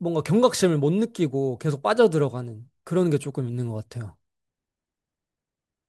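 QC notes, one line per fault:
No faults heard anywhere in this speech recording.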